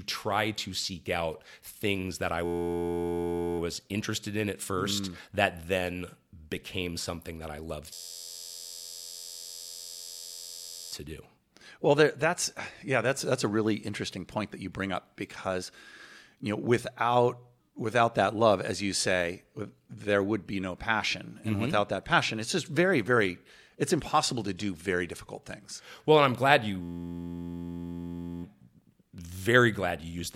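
At 2.45 s, right after "out things that I", the speech freezes into a system hang loop: the driver stalled while the hardware kept replaying one 11.61 ms slice, which fits a 512-sample buffer. That gives a steady 86.1 Hz buzz until 3.59 s, then "interested in at first" picks up with essentially nothing lost. The same buzz returns from 7.93 to 10.93 s after "something that I love", and from 26.82 to 28.43 s after "and I'm glad".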